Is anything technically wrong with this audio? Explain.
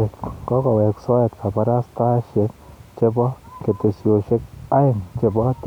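No, nothing technically wrong turns up anywhere in this bit of speech, so there's nothing here to flag.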